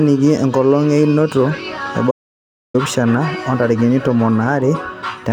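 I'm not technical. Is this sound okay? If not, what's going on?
No. There is an audio dropout to silence from 2.11 to 2.74 s. The speech cuts off abruptly and about 0.63 seconds of dead silence follows, with not even the faint background hiss of the room. The cause was likely a brief loss of the incoming signal, such as a loose connection or a momentary mute, while the recording carried on writing nothing. Whatever was said in that gap is permanently missing.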